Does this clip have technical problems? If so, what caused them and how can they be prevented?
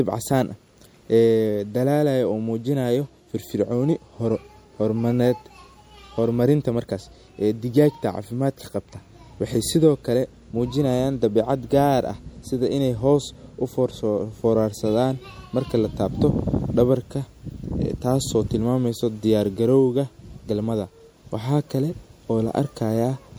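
Yes. Throughout the speech there is a watery, swirly quality with dulled treble, likely from MP3 compression at a bitrate that sounds near 64 kbps. The encoder drops the top band and toggles weak frequency lines between frames. On a spectrogram this shows as a flat high-frequency ceiling and flickering gaps below it. To prevent it, record and deliver in a lossless format or encode at a higher bitrate.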